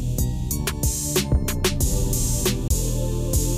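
At 2.68 to 2.70 s there is a CD skip. The laser lost its track and landed on another turn of the disc's spiral. Playback mutes for about 20 ms. The sound then resumes from a different point, jumping abruptly forward or back.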